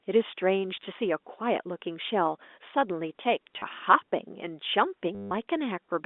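A telephone-band speech recording (about 250 Hz to 3.6 kHz, G.711), with packet loss with the last packet repeated at 0.77–0.85 s, 3.54–3.64 s and 5.15–5.31 s. Each gap is filled by replaying audio, giving small blips and short stutters and, in the 160 ms run, a robotic buzz near 100 Hz, which fits 10 ms packets.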